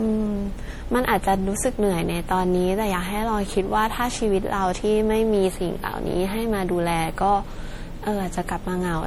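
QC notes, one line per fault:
Throughout, generation loss: the speech sounds swirly and hollow, with a watery smear over the whole 9 seconds and softened consonant attacks, worse than one MP3 pass at a rate around 64 kbit/s would leave, even though content still reaches about 20.9 kHz. The likely cause is repeated decoding and re-encoding, something like seven passes, each re-quantising on a shifted frame grid so that noise and spectral holes pile up and transients blur.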